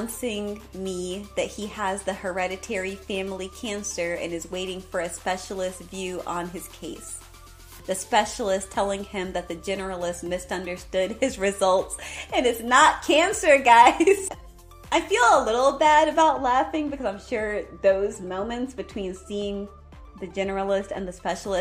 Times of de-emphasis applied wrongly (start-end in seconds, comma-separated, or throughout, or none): 16.22-21.29